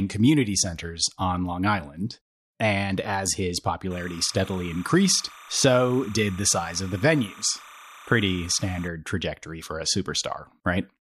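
It's a speech clip, and from just after "and as his" at 3.91 s until about 8.88 s, right before "trajectory for a", there's timecode bleed. You get a steady chirpy warble flipping between roughly 1 and 2 kHz, sitting around 20 dB under the speech. That's linear timecode leaking in from a neighbouring track or cable, its square wave toggling between two pitches, and the rhythm fits 29.97 fps code.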